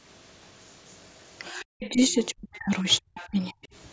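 Speech suppressed in double talk runs from 1.51 to 3.58 s. The talker's level keeps sinking and breaking apart, with the deepest drops falling by around 40 dB, and about a second and a half of that span is lost or badly thinned. The likely cause is both sides speaking at once: the echo canceller could not tell the near talker from the loudspeaker echo, so it attenuated everything it heard.

The other side's voice leaking through appears twice inside that stretch, as brief scraps from 1.81 to 1.89 s and from 3.18 to 3.27 s. The first sits roughly 20 dB below the main speech and the second roughly 25 dB below, each a faint fragment of a second voice. They likely come from the far end's loudspeaker playback that the echo canceller failed to fully subtract from the microphone signal.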